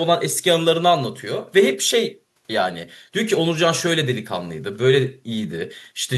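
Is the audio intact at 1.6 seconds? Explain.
Yes, the audio at 1.6 seconds is intact, with no dropout, click, distortion or other fault at that point.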